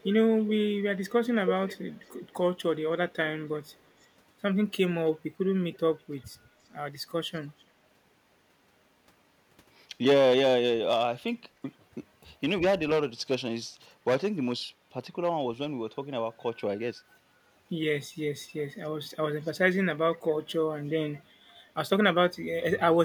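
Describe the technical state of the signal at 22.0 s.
At 22.0 s the speech signal is intact, with no audible fault at that moment.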